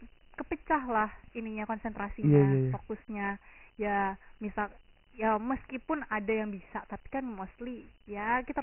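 Throughout the speech, Dialogic VOX ADPCM coding leaves nothing above 3 kHz, which fits 4-bit samples at 6,000 per second. Heavy quantisation adds a gritty hiss that tracks the speech. A spectrogram shows a flat ceiling at 3 kHz and grainy noise filling the gaps between harmonics.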